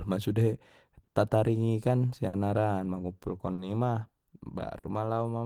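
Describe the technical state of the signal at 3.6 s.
At 3.6 s the speech is inside a short stall from a late packet, spanning 3.53 to 3.61 s. A packet arrived late, the jitter buffer ran dry, and the receiver stretched the last sound for about 50 ms before resuming, with nothing lost. On a spectrogram the harmonics run flat and smeared. The waveform shows a repeated, slightly buzzy stretch.

Clock drift between sender and receiver, with the sender's clock running roughly four percent slow, underlies this moment and the whole clip. The buffer keeps draining, so small repeats and hiccups recur at uneven intervals. These appear as brief duplicated cycles or seams in the waveform.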